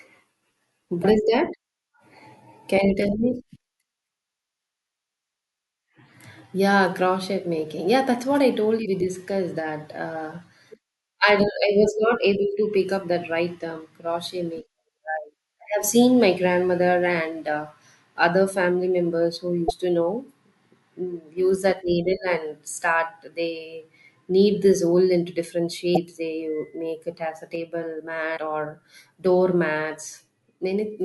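Damaged data in a compressed stream first appears at 1.01 to 1.05 s, and again at 8.82 to 8.86 s, 19.66 to 19.71 s and 25.93 to 25.97 s. Each is a brief blip of roughly 45 ms. Corrupted bytes in the encoded stream make the decoder misread those frames, lose sync and hunt for the next valid frame header. The result is a short disturbance that breaks the speech.

From 27.55 s to the end of the clip, one channel drops out. The speech suddenly falls by about 6 dB and stays quieter for the final few seconds. This is what happens when one side of a stereo pair goes silent and the remaining side is folded into the mono sum. The likely cause is a lost stereo channel, which halves the material common to both sides and removes anything carried only by the missing side.

Within that quieter stretch, at 28.33 to 28.38 s, damaged data in a compressed stream returns for one more roughly 45 ms blip. It has the same decoder resync as the earlier four.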